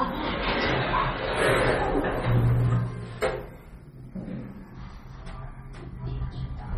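From start to end the audio has nothing above 13 kHz and sounds watery and swirly, with metallic chirping on bright content and smeared attacks. This is likely heavy MP3 compression at a low bitrate, near 32 kbps, where weak frequency lines drop in and out between frames.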